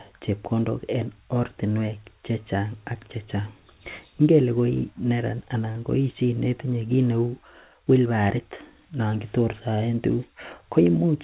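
From 5.72 to 5.78 s a sound hangs a little too long, with a faint buzz or dip: a short stall from a late packet, with 27 ms filled in.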